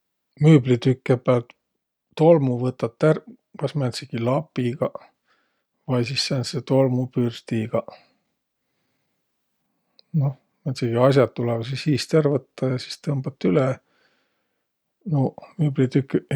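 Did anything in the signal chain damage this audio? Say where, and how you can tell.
Yes. From 4.02 s to 12.02 s the speech carries a 100 Hz buzz that sits under the signal and vanishes in the pauses. This is the signature of a resampler restarted on every block in the sample-rate conversion stage. The 48 kHz to 44.1 kHz converter was reset every 10 ms, so each block edge was filtered against missing neighbours. The resulting edge error repeats at the block rate and is audible only when there is signal to distort.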